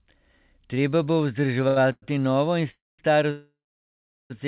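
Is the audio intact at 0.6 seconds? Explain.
Yes, at 0.6 s the speech is intact, carried through the WebRTC call path with its usual narrowband sound and nothing above 4 kHz.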